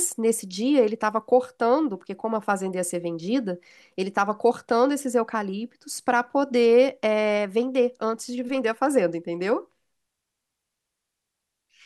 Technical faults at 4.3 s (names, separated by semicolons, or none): none